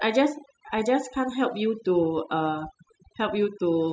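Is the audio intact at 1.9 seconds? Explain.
No. At 1.9 seconds the speech carries overdone noise removal, which runs through the whole clip rather than appearing as a local event. A noise reducer pushed too hard is cutting individual frequency bands whenever they sit close to its noise estimate, taking the softer parts of the voice along, so the background drops and breaks up into twinkling specks. Unlike a noise gate, which shuts the whole signal at once, this removes isolated bands independently.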